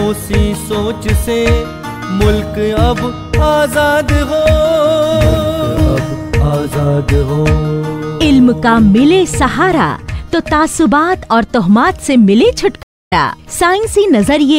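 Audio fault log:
12.83–13.13 s, stream reconnect: the connection dropped and the player re-established it, starting a new decoder mid-stream. The audio cuts to about 0.24 s of silence, then picks up roughly 150 ms further on, so a short stretch is skipped, with the first frame or two muted or fading in.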